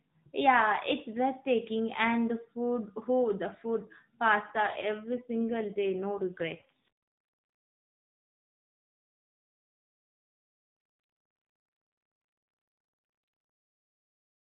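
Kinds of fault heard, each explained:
AMR rate drop: from 4.52 to 6.90 s and 10.68 to 13.54 s the speech turns buzzier and more synthetic, with no gap and the same narrow band. This fits the network forcing the AMR codec from 12.2 down to 5.9 kbps, then restoring it.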